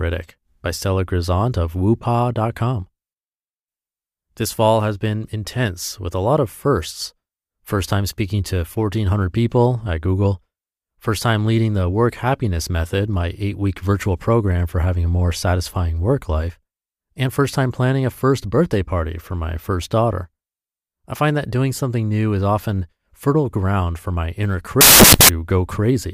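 At 24.81 s the speech breaks into loud, harsh broadband noise that lasts until 25.29 s, just under half a second. This is a case of samples built from the wrong bytes: across that stretch each sample has been assembled with its bytes misaligned or swapped, so the rapidly varying low-order bits land in the high-order position and dominate the value. The result is loud, harsh broadband noise in place of the speech.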